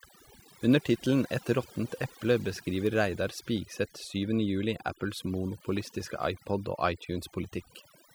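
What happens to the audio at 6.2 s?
Overdone noise removal is running throughout, so at 6.2 s it is still active. A noise reducer set too hard is pulling individual frequency bands down or out whenever they sit near its noise estimate. That takes quieter parts of the speech with it, leaving a near-silent background dotted with twinkling specks. On a spectrogram the background shows as dark gaps scattered with isolated bright flecks, and the speech bands look patchy and eaten away at the edges.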